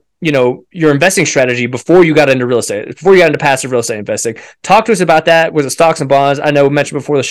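Speech with hard clipping throughout: the signal was driven about 6 dB past what a stage could pass, so a few percent of samples, the louder peaks, are cut flat. Those squared tops add high harmonics, heard as crackle and grit on peaks.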